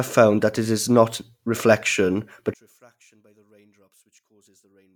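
From 2.54 s, right after "it is not reflection", the speech drops to a faint residue. It stays there until the clip ends at 4.96 s, about 36 dB below its earlier level. The likely cause is one channel inverted. With one side's polarity reversed, the centred voice cancels when the two channels are summed to mono, and only their small difference survives. On a waveform the envelope shrinks abruptly to a sliver. A spectrogram shows the bands fading to near-empty.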